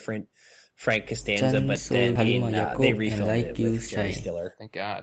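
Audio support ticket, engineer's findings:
Skip ahead, 2.15 to 2.17 s: about 0.4 s of speech missing, joined with no fill. Jitter buffer likely dropped queued audio to shed roughly 0.4 s of latency. Waveform shows an abrupt splice; spectrogram shows a hard vertical seam between unrelated frames.

Jitter buffer speed-up, 2.99 to 4.68 s: speech runs at 107% rate, same pitch, sounds hurried. Buffer trimmed pitch-period chunks repeatedly, around 150 ms in total, to cut delay. Spectrogram shows harmonics at unchanged spacing and syllables compressed in time, all within the Opus 8 kHz band.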